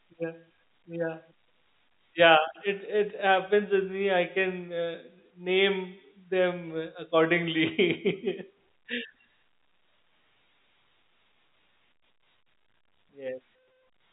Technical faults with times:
none

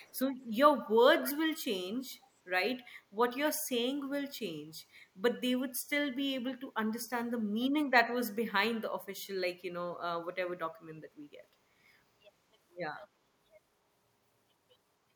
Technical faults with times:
0.00-0.19 echo leak
1.94-2.27 echo leak

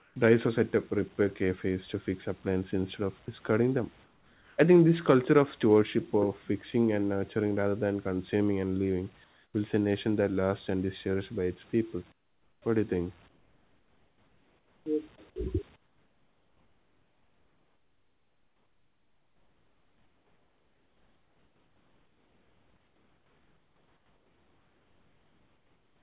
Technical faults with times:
0.00-0.16 comfort noise in place of the background
3.26-3.28 sound dropped by the voice detector
4.04-4.58 comfort noise in place of the background
9.24-9.54 comfort noise in place of the background
12.12-12.62 comfort noise in place of the background
13.28-14.86 comfort noise in place of the background
15.76-26.02 comfort noise in place of the background

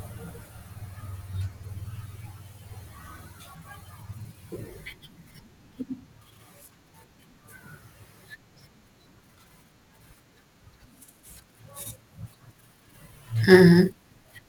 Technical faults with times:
0.00-14.48 block size mismatch (truncated)

